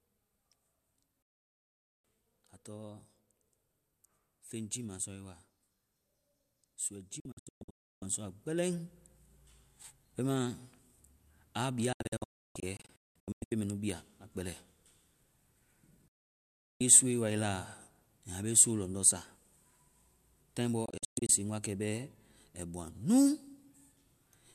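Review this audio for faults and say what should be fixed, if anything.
Digital broadcast dropouts at 1.22–2.05, 7.20–8.02, 11.93–13.52, 16.08–16.81 and 20.86–21.30 s: the receiver mutes on failed frames. Unlike concealed packet loss, these are clean 3 ms cuts to silence, scattered in the second, third and last. Improve reception and error protection to prevent them.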